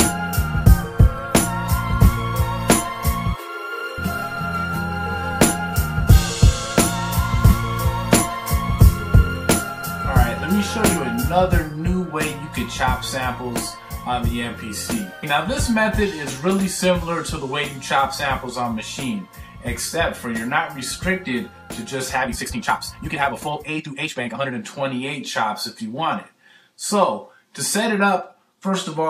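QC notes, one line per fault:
22.21–24.51 s, time-stretched section: the pace jumps abruptly to roughly 1.85 times normal speed for about 2.3 s while the pitch stays where it was, and the sound turns rushed before returning to normal pace. The likely cause is software compressing this stretch to fit a shorter length, holding pitch by dropping short segments, so the missing slices produce the hurried texture rather than a chipmunk-style rise.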